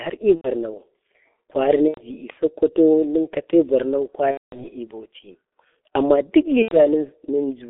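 Speech, heavily degraded by the G.723.1 codec throughout: the band is held to roughly 250 Hz–3.5 kHz, and the muffled, hoarse texture fits its 6.3 kbit/s mode. VoIP packet loss concealed by the speech codec appears at 0.35–0.48 s, 1.88–2.04 s, 4.31–4.66 s and 6.62–6.81 s. At each gap the decoder stretches the last sound into a buzzy tone or coloured noise that fades, which fits roughly 90 ms of lost frames, or 210 ms in the longest gap.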